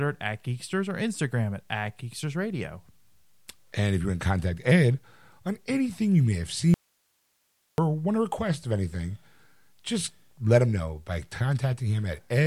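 At 6.74 s the speech cuts out abruptly. This is an audio dropout to a faint residue. The signal stays gone for about 1.04 s and returns at 7.78 s. It does not fade or pause naturally. It simply stops and restarts mid-flow. The gap holds only hiss, far below the speech, at about 45 dB down. The likely cause is a brief loss of the source while the path after the break stayed live.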